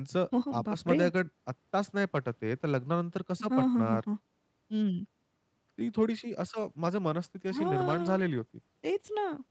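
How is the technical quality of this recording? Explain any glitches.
The recording has one clear glitch, a call bitrate drop in the last few seconds. Before it, the speech is carried by the call's Opus codec at 32 kbps, with nothing above 8 kHz.

From 6.47 s to the end, the call's bandwidth estimate falls and the encoder is told to spend far fewer bits, dropping from 32 kbps to 14 kbps for about 3 seconds without recovering. With less than half the bits, Opus quantises the speech much more coarsely, so the voice turns rough and watery, losing clarity and crispness until the clip ends.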